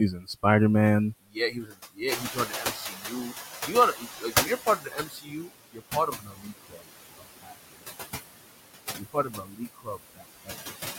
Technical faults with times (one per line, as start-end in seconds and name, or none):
0.00-10.99 noise suppressor artifacts
0.11-0.44 speech cut by the noise suppressor
1.13-3.34 speech cut by the noise suppressor
2.07-5.10 noise suppressor catching up
3.66-6.85 speech cut by the noise suppressor
7.18-7.82 speech cut by the noise suppressor
8.97-10.54 speech cut by the noise suppressor